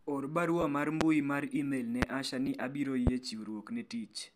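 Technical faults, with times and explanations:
0.61–0.64 s and 2.46 s, lost LE Audio frames: two brief dropouts, about 15 ms then 7.5 ms, which fits two and then one 7.5 ms LC3 frames. The decoder fills each gap by repeating the last spectrum with scrambled phase, so the speech turns into a short grainy smear rather than falling silent.
1.01–1.04 s, 2.02–2.05 s and 3.07–3.10 s, loud pop: three sharp clicks, each lasting about 30 ms, land on top of the speech, which continues underneath. The first two peak roughly 25 dB above the speech and the third roughly 20 dB. A sudden voltage step, likely from static or a driver glitch, is briefly shaped by the downstream circuitry.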